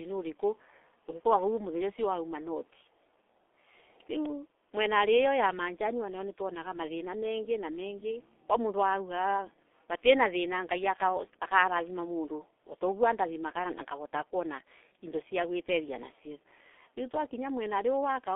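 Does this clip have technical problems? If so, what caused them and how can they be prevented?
Yes. The whole clip carries heavy G.723.1 codec damage. At around 6.3 kbit/s, audio is packed into 30 ms frames against a slowly updated voice model, so speech comes out muffled and hoarse, consonants smear, and nothing survives outside roughly 300 Hz to 3.5 kHz. To prevent it, use a wideband codec at a higher bitrate end to end.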